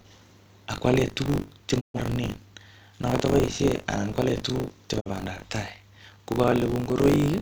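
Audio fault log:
Throughout, buffer tearing: a steady robotic buzz at 50 Hz rides on the speech and disappears in the silent gaps. The program filling the playback ring buffer and the hardware draining it have drifted until they meet inside every period. About a fifth of each buffer is audio left over from one lap earlier, a few tens of milliseconds stale, joined by abrupt edges on both sides. That repeating seam at the buffer rate produces the rattle.
1.79 to 1.99 s and 4.99 to 5.10 s, digital broadcast dropout: the speech fades to silence over 20 ms, first right after "tuguk che" and again after "anan kwale tuguk chebo". The receiver stopped getting decodable frames and muted until valid ones returned. The first hole drops about 128 ms of programme, which fits three lost frames. The second drops about 43 ms, which fits a single frame. Whatever was sent during those gaps is simply missing.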